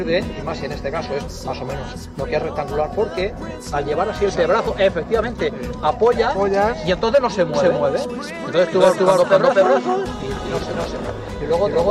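From 7.54 s to the end, every sound is followed by an identical, equally loud repeat roughly 300 ms later, carrying no reverb tail or room colour, and the repeat cuts in abruptly rather than building up. This is a doubled audio track: the same full-band signal is mixed in twice, out of step. The likely cause is a second capture through a slower path, or an edit that left two offset copies layered together.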